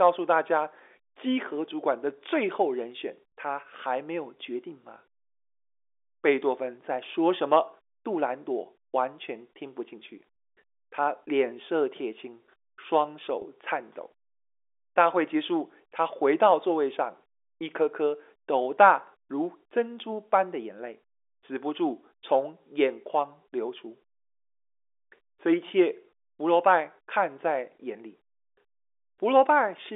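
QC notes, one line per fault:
3.28–3.32 s, 10.34–10.36 s, 13.42–13.44 s, packet loss with pitch repetition: audio went missing for 40 ms, then 20 ms, then 20 ms, which fits two lost 20 ms packets and then single ones. The receiver repeated the last pitch period over each gap, so it sounds held and buzzy for that instant.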